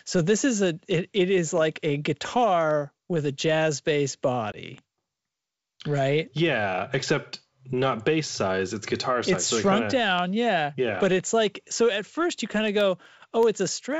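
A speech recording carried over G.722 wideband telephone coding, which holds up cleanly here, is marked by three bit error spikes: at 1.58 s right after "a it it is", at 4.78 s, and at 11.20 s just before "like so at first". Each is a sharp tick unrelated to the speech, where a flipped bit sends the sample value jumping by a power of two and straight back. On the waveform each shows as a lone needle. The first two point to a single corrupted sample, the last to a run of about three. On a spectrogram each is a thin vertical line running through every frequency. At 4.52 s comes packet loss on an ADPCM call. About 20 ms of audio, roughly one packet, drops out as a hard-edged block of silence, visible as a flat gap in the waveform and a blank column on the spectrogram. Speech then resumes slightly distorted until about 4.57 s, because the decoder's predictor and step size had drifted out of step with the sender's and need a moment to resync. 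From 12.68 to 13.93 s, after "at first you kind", periodic USB or driver dropouts produce about ten ticks spaced every 0.125 s. Something blocking the bus or driver at that fixed interval removes a tiny sliver of audio, well under a millisecond, and replaces it with silence. This shows as evenly spaced hairline gaps and matching vertical stripes, audible only where speech is present.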